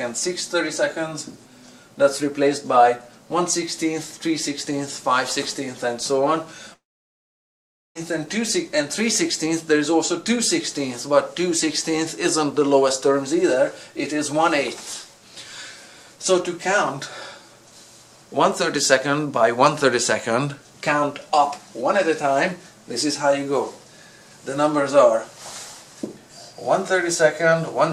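A long network dropout, likely a stall in arriving data, loses 1.22 s from 6.73 to 7.97 s: a short fading buzz, then 1.15 s of silence.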